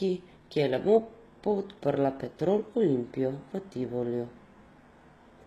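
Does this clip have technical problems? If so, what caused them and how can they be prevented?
Yes. HE-AAC compression runs throughout the speech, and its damage is plainly audible. Only the lower spectrum was properly coded, while the treble was likely rebuilt by spectral band replication, copying lower bands upward under a coarse envelope. That synthetic top is not the original, so its harmonics don't match the real ones, giving a gritty, metallic edge, and nothing remains above 12.4 kHz. The plainly audible artefacts fit a bitrate around 16 kbps. To prevent this, encode at a higher bitrate or with a full-band codec.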